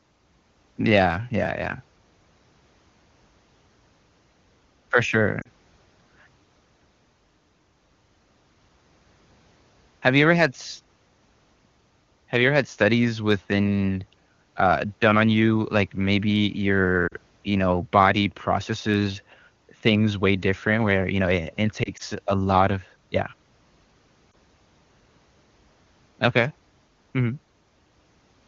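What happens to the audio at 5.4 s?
Two speech frames failed their radio checksum between 5.41 and 5.47 s, a stretch of lost AMR speech frames of about 40 ms, which fits two 20 ms frames. With no valid data, the AMR-WB decoder repeated the last good pitch and vocal tract settings at falling gain. The result is a short dip where the sound smears briefly and thins toward silence, then returns weak or rough for a moment.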